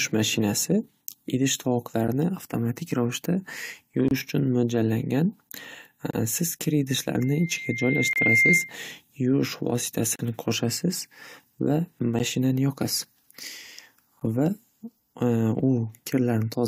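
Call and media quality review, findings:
Gap between stream segments: hard-edged dropouts to silence, regular every 2 s, at 4.08–4.11 s (27 ms), 6.11–6.14 s (27 ms), 8.13–8.16 s (28 ms), 10.16–10.19 s (36 ms), 12.19 s (11 ms) and 14.20 s (15 ms). The component is the segmented stream packaging or player. Timestamps of consecutive 2 s segments leave a small hole, which playback pads with silence. No audio is missing, only time inserted.

Loudspeaker feedback squeal: a single tone at 2.1 kHz swells over about a second from 7.19 s and howls until 8.74 s, ending up roughly 5 dB above the speech. The 8.13 s gap falls inside it. The component is the acoustic path from a loudspeaker into the microphone. At 2.1 kHz the loop gain exceeds one, so that frequency regenerates and grows on its own.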